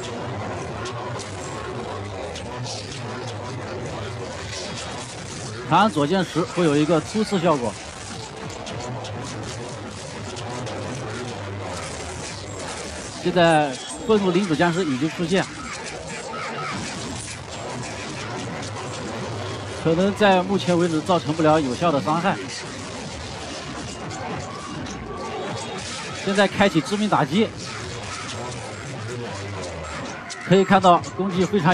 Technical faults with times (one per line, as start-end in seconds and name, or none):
none